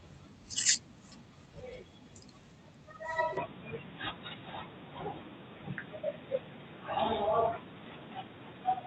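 At 3.37 s the sound turns abruptly dull and boxy to the end, with nothing above 3.8 kHz, a faint new background noise and no gap or level jump, likely an input switched to a poorer device. The new noise floor separates it from the call codec's own steady 8 kHz ceiling.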